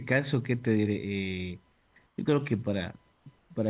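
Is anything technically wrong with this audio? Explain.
Yes, there are two faults.

A USB whine runs throughout: a fixed 1 kHz tone with harmonics, strongest at 4 kHz, about 40 dB below the speech. It comes from USB frame current leaking into the audio ground.

Comfort noise replaces the background at 1.72–1.96 s, 2.06–2.18 s, 3.12–3.26 s and 3.38–3.50 s. Room tone becomes a flat, featureless hiss about 3 to 5 dB quieter. The likely cause is discontinuous transmission, with the receiver synthesising noise.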